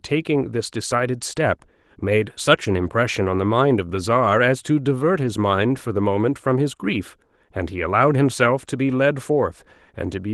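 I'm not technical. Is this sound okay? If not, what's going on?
Yes, this speech recording is technically sound: it has passed through Opus voice compression, which has left only light traces, and nothing has gone wrong with the signal itself.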